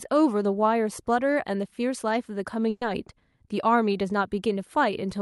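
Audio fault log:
2.69 to 2.83 s, burst of packet loss: roughly 120 ms of consecutive packets arrived too late or not at all, so the receiver extended the last sound it had and faded it down, a brief held, dimming smear before the speech jumps ahead with 120 ms missing.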